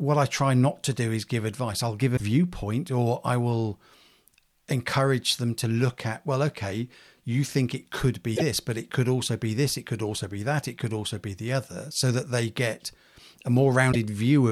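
Speech, with three brief glitches at 2.16–2.21 s (after "give advice I'll give"), 8.35–8.42 s (between "you think it could" and "but it could also") and 13.91–13.95 s, likely a broken MP3 bit reservoir: each lasts about one and a half to three 26.1 ms frames and skips ahead.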